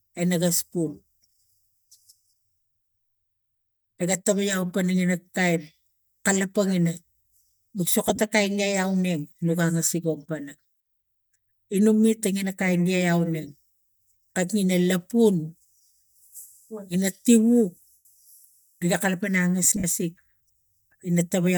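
Lost LE Audio frames occur at 3.90 s, 8.03 to 8.18 s, 17.92 to 18.05 s and 19.64 to 19.84 s. The LC3 decoder repeats the last spectrum with scrambled signs. Unlike a clean dropout, the gaps become a noisy smear that fades during the 128 ms loss.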